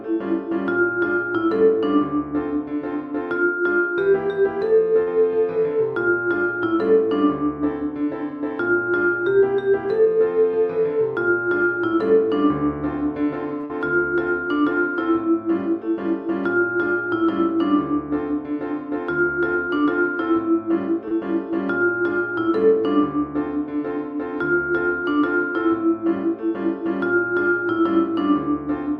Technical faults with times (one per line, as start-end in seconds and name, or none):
5.02-5.08 short stall from a late packet
13.60-13.64 short stall from a late packet
13.65-13.70 short concealed packet loss
19.55-19.84 jitter buffer speed-up
21.08-21.12 short stall from a late packet